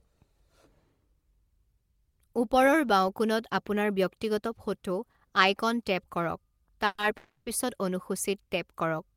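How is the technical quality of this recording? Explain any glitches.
The speech has two call audio freezes close together. The first runs from 6.86 to 6.99 s, and the second, longer one from 7.17 to 7.47 s. Each time the last sound gets stretched into a fading buzz, for about 120 ms and then 290 ms, before a brief dropout and the speech resuming. Likely cause: delayed packets draining the jitter buffer. Nothing seems lost, but the talk now runs that much later.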